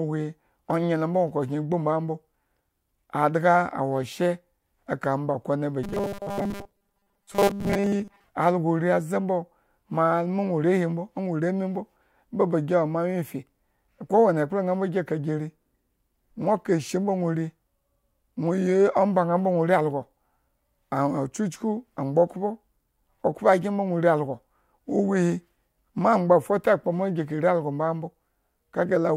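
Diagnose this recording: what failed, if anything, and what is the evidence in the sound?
From 5.83 s to 8.24 s, just after "eka omba kone ba", the speech turns into a rigid, metallic buzz pitched at 200 Hz. The words stay roughly traceable until "alagore aze" returns cleanly. This is robotic sound from repeated short buffers, likely at the driver or buffer stage. New audio arrived too seldom. The software filled the gaps by looping a 5 ms slice, and that slice length sets the fixed 200 Hz pitch. Most of the real audio in that stretch was skipped.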